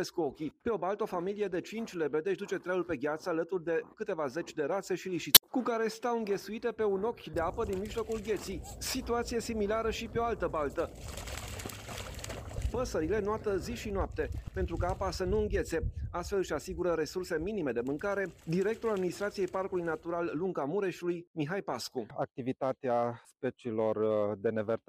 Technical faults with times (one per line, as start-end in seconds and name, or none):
5.32-5.44 damaged data in a compressed stream